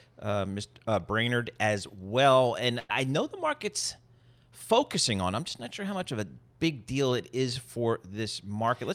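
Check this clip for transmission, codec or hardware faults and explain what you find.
There is one fault: a burst of packet loss from 2.79 to 2.91 s, between "as well and" and "know the market's focusing". About 100 ms of audio went missing. The receiver extended the last sound and faded it down, so the gap is filled rather than silent as a plain dropout would be.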